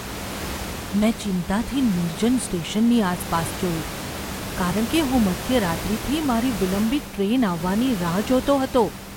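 No technical faults are present.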